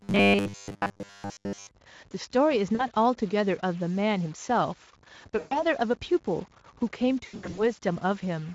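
Throughout the speech, a noisy distortion rides on every sound and the pauses fill with a hiss instead of falling silent, which points to a stuck bit, likely a converter data line held at one value. Unlike codec noise, it persists in silence and tracks the waveform's sign.

From 0.01 to 1.71 s the speech turns into a rigid metallic buzz at a fixed 100 Hz while still loosely following the syllables. That is robotic sound from repeated short buffers, likely from a 10 ms chunk replayed in place of most of the real audio. The constant pitch sets it apart from codec concealment, which fades.

VoIP packet loss concealed by the speech codec appears at 2.75–2.85 s (about 40 ms lost), 5.39–5.64 s (about 120 ms), and 7.25–7.72 s, where 240 ms of gaps are scattered over 320 ms with runs up to 80 ms. Each time the Speex decoder stretches its last pitch and filter into a fading buzzy tone or coloured noise, and the speech stays weakened briefly after audio resumes.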